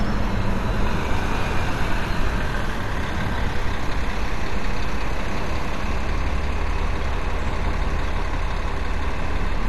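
Throughout, a likely cause is MP2 compression at a low bitrate, around 64 kbps: too few bits force whole upper sub-bands off, leaving nothing above 12.1 kHz. The sound is plainly dull, with a gurgling, granular roughness as bands flicker and coarse quantisation sets in.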